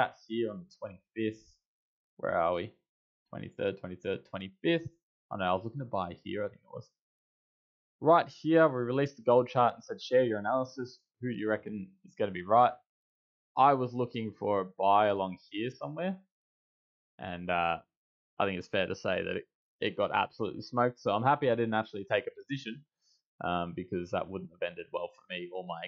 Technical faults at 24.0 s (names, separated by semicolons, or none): none